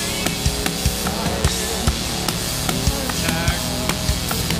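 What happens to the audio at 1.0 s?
A steady, raspy mains buzz sits just below the sound throughout, 1.0 s included: switching spikes twice per 60 Hz cycle from an unshielded or dimmed supply, with harmonics reaching several kHz.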